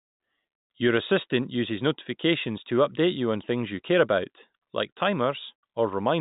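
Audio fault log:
No faults to log for this speech clip.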